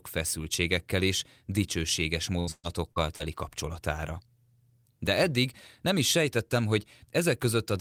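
From 2.39 to 3.23 s, just after "feszültségekkel és dicsőséges", repeated packet loss breaks up the stream: four gaps, the longest 122 ms, are patched by stretching the previous sound over about a third of the span, giving choppy, robotic speech with pieces missing.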